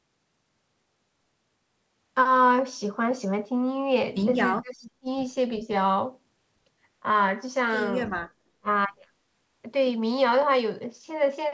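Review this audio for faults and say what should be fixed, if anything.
The speech drops away sharply, by around 35 dB, from 4.55 to 5.09 s and again from 8.58 to 8.69 s. This is likely speech suppressed in double talk: the echo canceller mistook the near talker for loudspeaker echo while both sides spoke, and attenuated them. A double-talk detector that holds off suppression when near-end energy is strong would prevent it.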